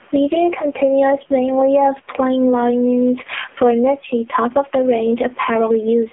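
Gain pumping runs from start to finish, a level swing of roughly 15 dB. The room noise sits about 41 dB below the speech. The likely cause is gain set far too high, with a fast limiter clamping every peak.

The AMR narrowband mobile codec is also present throughout, and its damage is heavy. Nothing reaches above 3.5 kHz, and the lows thin out below about 250 Hz, giving the boxed-in 250 Hz to 3.4 kHz telephone band. That alone could be simple band-limiting. What identifies the codec is the buzzy, synthetic vocal tone and the swirling warble in the background noise. These artefacts point to a very low bitrate, around 5.9 kbps.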